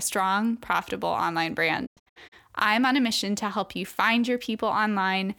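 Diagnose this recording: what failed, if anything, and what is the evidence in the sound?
Between 1.85 and 2.34 s the speech breaks up into a cluster of short silent holes, each entered and left through a quick fade of about 20 ms. Roughly a quarter-second of sound goes missing across that half-second stretch, and the longest single gap lasts 96 ms. This is a digital broadcast dropout at the reception stage: the receiver lost signal or rejected corrupted frames and muted until clean ones arrived. The pattern suggests around eight short frames were discarded.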